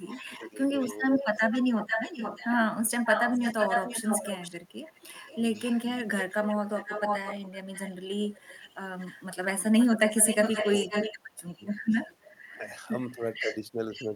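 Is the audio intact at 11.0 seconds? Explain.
No. An echo leak runs from 0.05 to 12.41 s, likely from a loudspeaker echo canceller letting its microphone pickup through, so a copy of the speech returns about 496 ms late, only about 5 dB quieter. Speech suppressed in double talk spans 10.54 to 11.61 s. The canceller likely mistook overlapping speech for echo and turned it down, so the speech dips by up to about 25 dB in pieces totalling about half a second.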